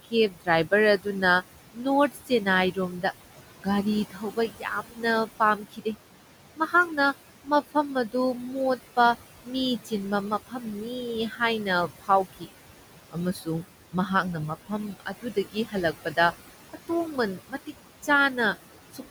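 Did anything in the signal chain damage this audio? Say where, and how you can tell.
Yes, and it's the call-processing stage, specifically the noise suppressor. Noise suppressor artifacts run through the whole clip. The room noise sits about 13 dB under the speech, and the suppressor pulls it down by about 17 dB in the gaps, so the background ducks away between phrases and comes back up underneath them. That gating works band by band, frame by frame.

The same suppressor is also cutting speech, because it mistakes quiet speech for noise. The affected stretches are 0.03–3.04 s, 3.57–5.87 s, 6.57–8.15 s, 8.77–12.48 s, 13.11–14.1 s, 14.66–18.08 s and a brief moment at 18.92–19.02 s. Within those spans, the soft consonants and trailing word endings get turned down by about 16 to 19 dB, so they sound swallowed or faint. The longest loss comes in the 3.57–5.87 s stretch, roughly a second's worth.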